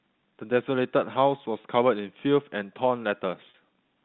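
At 1.62–1.64 s and 3.50–3.54 s, the speech briefly holds a buzzy tone. This is packet loss with pitch repetition, looping the last pitch period across 20 and 40 ms gaps.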